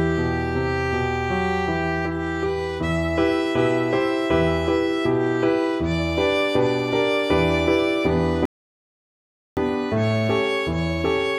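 At 8.45 s the sound cuts off and stays silent until 9.57 s, then picks up exactly where it left off. This is a rebuffering stall: playback ran out of downloaded audio and waited for more, inserting about 1.11 s of extra time while losing nothing. On a waveform it appears as a flat gap splitting otherwise continuous material. A spectrogram shows a blank vertical band with energy resuming seamlessly on the other side.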